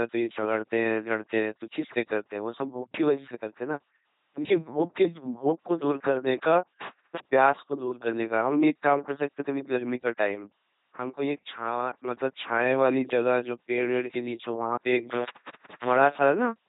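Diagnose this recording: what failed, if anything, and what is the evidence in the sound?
Buzzy, mechanical robot speech throughout, with nothing above 3.8 kHz. This is heavy codec damage from the LPC-10 vocoder at 2.4 kbit/s, which forces every moment to be wholly voiced or unvoiced.

The audio drops out with crackly edges between 6.81 and 7.19 s (open about 0.23 s) and between 15.12 and 15.96 s (open about 0.59 s). This is intermittent contact in the analogue wiring: a loose plug or cable briefly opening.

Sound and background fall together by about 6 dB at 10.96 s and return at 11.96 s. This is likely a sudden gain jump, a digital gain step applied without a ramp.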